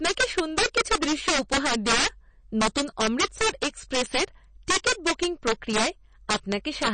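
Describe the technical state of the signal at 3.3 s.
Integer overflow runs through the whole speech clip, 3.3 s included. The gain pushes the loudest parts about 10 dB past the integer limit. Instead of being held at the limit, those samples wrap around to the opposite sign and jump across the full range. Only a few percent of samples are affected, so the louder moments break into sharp cracks, much sharper than ordinary clipping.

MP3 compression also covers 3.3 s, and it is likely the cause of a plainly audible watery, swirling quality. At a data rate that fits about 32 kbps, the encoder runs short of bits. Weaker frequency lines get zeroed and flicker on and off from frame to frame, so s sounds chirp metallically and attacks smear. Nothing is heard above 9 kHz, which matches the fixed treble cut an encoder applies at this rate.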